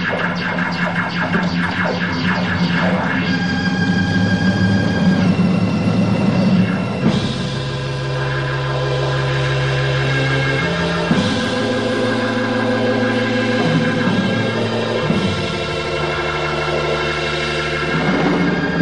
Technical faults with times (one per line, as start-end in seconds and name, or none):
none